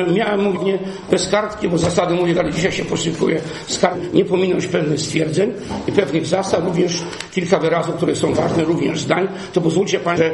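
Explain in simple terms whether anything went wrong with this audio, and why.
Compressed frames skipped at 0.51, 2.33, 3.90 and 10.13 s. At each point the audio jumps ahead by roughly a third to half a second, because whole blocks of about 46 ms never reached playback.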